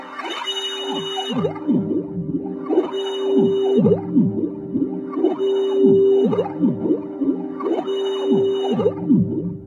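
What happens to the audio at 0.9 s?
Nothing goes wrong at 0.9 s; the sound carries on intact through that moment, with no dropout, click or distortion.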